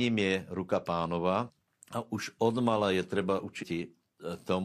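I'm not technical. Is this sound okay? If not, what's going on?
No. Twice the speech breaks up briefly, first at 1.44 to 1.51 s and again at 3.58 to 3.64 s, just after "už odmala je". This is damaged data in a compressed stream: the player hit corrupted bits and briefly lost its place.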